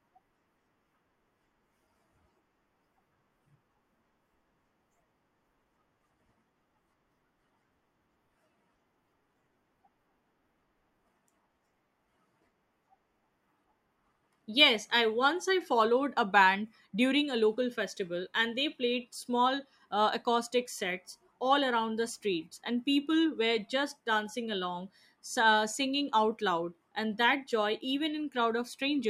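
Speech recording, and no technical faults are audible anywhere in it.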